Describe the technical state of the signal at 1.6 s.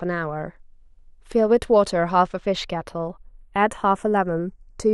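At 1.6 s the channels are drifting apart, as they do throughout. Two clocks mismatched by around 40 ppm let the inter-channel delay creep toward roughly 0.15 ms, so the mono sum's comb notches glide slowly, unlike the fixed coloration of a constant channel offset.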